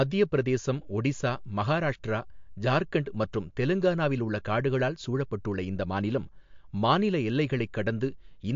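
From start to finish the speech carries plainly audible MP3 compression, likely from encoding at a low bitrate near 50 kbps. Nothing survives above 7.2 kHz, and weak frequency lines flicker between frames, giving a watery swirl and chirpy s sounds that a plain low-pass filter would not produce.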